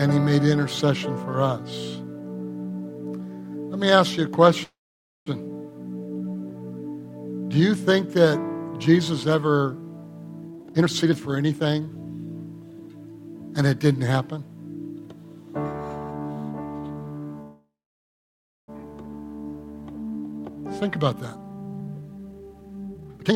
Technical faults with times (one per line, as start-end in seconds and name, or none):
4.63-5.28 call audio freeze
10.48-11.97 jitter buffer speed-up
17.41-18.70 call audio freeze
20.25-23.36 jitter buffer speed-up